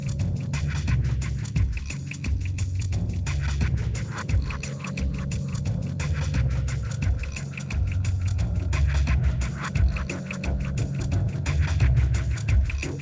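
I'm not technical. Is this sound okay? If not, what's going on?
Yes, the recording is technically sound, with nothing going wrong in the signal at any point.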